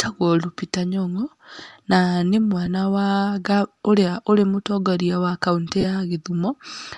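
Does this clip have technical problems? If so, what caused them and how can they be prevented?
Yes. Throughout the speech there is a breathy, grainy edge, with the upper frequencies sounding rough and hissy rather than clean. This is likely Bluetooth LC3 compression, at a rate that fits a 48 kbps stream with 7.5 ms frames. At that rate the encoder discards much of the fine upper-spectrum detail and the decoder fills those gaps with noise. On a spectrogram the high band looks speckled and noise-textured instead of showing crisp harmonic lines. To prevent it, use a higher LC3 bitrate or a wired or higher-quality link.

Lost LE Audio frames cause two brief smeared glitches, at 2.66–2.68 s and 5.81–5.84 s. The first fits a single lost 7.5 ms frame and the second fits about three frames, roughly 22.5 ms. In each gap the decoder reuses the last good spectrum with randomised signs, so the sound turns into a short noisy blur instead of continuing naturally. 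On a spectrogram each appears as a thin vertical patch of diffuse energy that breaks the harmonic structure. In the waveform the signal looks irregular and noise-like for that instant. To prevent it, improve radio conditions by shortening the distance, removing obstructions and reducing 2.4 GHz interference.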